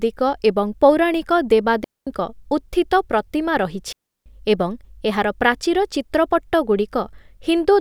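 Clean holes of near silence, with no noise burst on either side, open at 1.84–2.07 s after "ଏବଂ ପୌରାଣିକ" and at 3.93–4.26 s before "ଏବଂ ଏହାର ପ୍ରାଚୀର". This is digital wireless dropout: the link lost too much data, so the receiver muted for 0.23 s and then 0.33 s.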